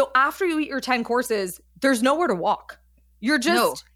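Nothing in this speech recording stood out as a technical problem on listening.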